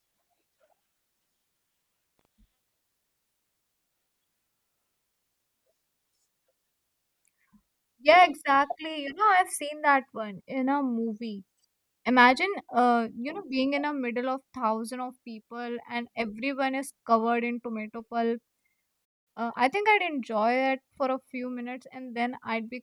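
A speech recording with three faults. The first is a loose connector crackle from 2.18 to 2.25 s. For about 70 ms an irregular scratchy burst sits on top of the speech. A worn or dirty contact is making and breaking as it shifts. Each break chops the signal, and any DC on the line turns the reconnections into small pops. The burst is short but rough and uneven. Later the sound stops dead at 19.05 s. It stays silent for about 210 ms, until 19.28 s. This is a playback stall. The speech cuts off in mid-flow and then resumes. The likely cause is that the player ran short of data, or that its audio thread was held up, so it had nothing to send to the output for that moment. Right after the gap, from 19.28 to 20.12 s, the speech runs fast. This is a time-compressed catch-up. The player is clearing the backlog the stall left behind. It removes small slices of audio and cross-fades across the joins. 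This gives a pace about 1.25 times normal, and the pitch stays where it was. Normal pace returns after 20.12 s.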